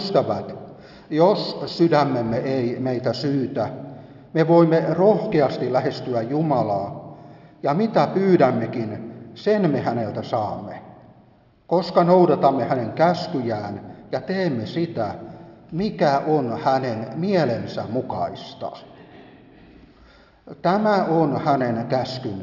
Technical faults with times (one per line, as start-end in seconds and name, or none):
none